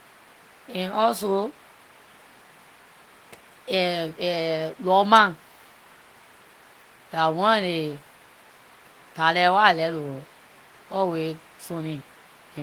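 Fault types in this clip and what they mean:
Nothing to list here, since this speech recording has no audible faults anywhere in it.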